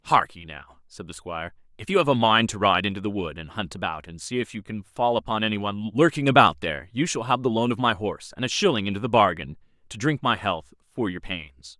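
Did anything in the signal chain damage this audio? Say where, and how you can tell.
No, nothing along the chain has left an audible mark on this speech recording. There is no point in the clip where a stage of the signal path can be heard interfering with the sound.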